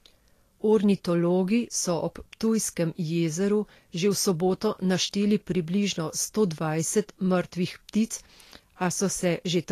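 From start to finish the speech carries plainly audible codec damage, likely from Vorbis compression at a low setting, around 36 kbps by the sound of it. Nothing is present above 14.1 kHz, and the treble beneath that limit is coarsely quantised into grainy, hissy noise that roughens tones and softens consonant attacks.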